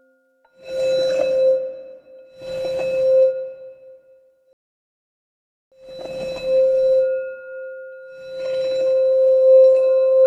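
At 4.53 s the audio cuts to silence. It resumes at 5.72 s, exactly where it stopped. This is a rebuffering stall. The player ran out of downloaded audio and waited for more. Nothing is lost, but about 1.19 s is added.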